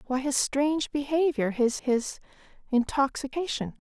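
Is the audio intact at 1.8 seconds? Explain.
No. At 1.79 s there is an abrupt jump in the speech, as though about a tenth of a second were skipped with no gap of silence. This is likely a dropped buffer (overrun): the samples were overwritten before being read, and the surrounding audio was spliced together directly.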